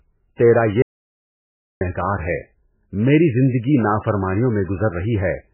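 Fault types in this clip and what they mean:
MP3 compression: The speech is heavily damaged throughout, and low-bitrate MP3 encoding is the likely cause. The sound suggests a very low bitrate, around 8 kbps. Nothing is heard above 3 kHz, so the treble is cut off and the voice sounds dull. With so few bits, weak frequency components drop in and out from frame to frame. That gives a watery, swirling texture. Sibilants turn metallic, and attacks are smeared.
Audio dropout to silence: At 0.82 s the speech stops abruptly and gives way to dead silence. It returns at 1.81 s, so nearly a second is lost. No room tone fills the gap. A lost input is the likely cause, whether from a disconnected device, a failed link or a mute. The recording carried on writing silence, so whatever was said in that stretch is gone.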